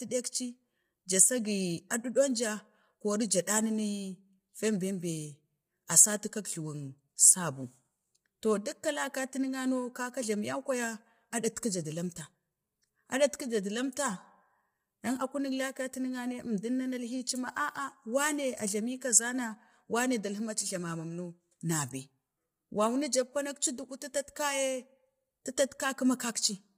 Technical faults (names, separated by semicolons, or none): low-delay AAC compression